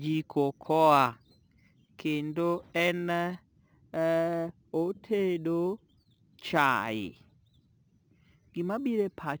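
Imaging from sample-and-hold upsampling runs through the whole speech clip. Each sample was repeated without smoothing, which fits a source near 22 kHz, so mirrored copies sit between 11.03 and 22.05 kHz at about -24 dB, heard as metallic fizz tracking the voice.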